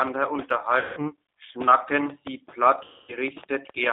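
Speech that has passed through a narrowband G.729 codec path, with the sound confined to roughly 300 Hz to 3.7 kHz and nothing above. The coding is consistent with 8 kbit/s G.729A. That codec does not send the waveform. It rebuilds each 10 ms frame from a vocal-tract filter, a pitch predictor and a few pulses, so the codec damage here is plainly audible as a rough, slightly synthetic buzz on the voice along with the missing top end. Two bursts of VoIP packet loss concealed by the speech codec follow. From 0.79 to 1.09 s about 180 ms of audio was lost, which fits nine 20 ms packets. From 2.84 to 3.16 s about 240 ms went missing, which suggests twelve packets. In each gap the decoder kept repeating its last pitch and filter while turning the gain down, so the sound smears into a fading buzzy tone. Because every frame builds on the one before, the voice stays thin and distorted for a short while after real packets resume. 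Overlapping the second gap, a train of clicks runs from 2.10 to 3.70 s. It is a handful of similar sharp pops, about seven in all, arriving irregularly at about 4.4 per second and peaking about 5 dB above the speech. They tick through pauses as well as over the voice, which points to likely electrical interference or a faulty connection or power supply injecting pulses.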